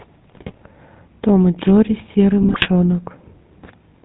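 Throughout, the speech sounds buzzy and gravelly, with nothing above 4 kHz. This is the plainly audible GSM full-rate codec: a vocal-tract filter driven by sparse, regularly spaced pulses, consistent with a 13 kbps full-rate coder.

From 0.30 to 0.57 s, and again from 2.42 to 2.67 s, the speech breaks into squawks, pops and gargling. These are GSM bit errors: corrupted bits reach the decoder, scrambling its filter, pitch and gain values, which warps the spectrum and throws the level around frame by frame.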